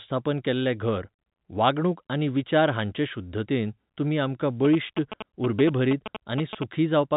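From 4.65 to 6.64 s, GSM signalling bursts break in: a nearby 2G phone sends short clusters of radio pulses while it signals to the network, and the audio circuitry rectifies them into a galloping dit-dit-dit of brief 217 Hz buzzes, only a little quieter than the speech. On a spectrogram they appear as grouped vertical stripes with harmonic lines at 217 Hz multiples, reaching up to the telephone band's edge near 3.8 kHz. The waveform shows grouped rectangular pulse trains.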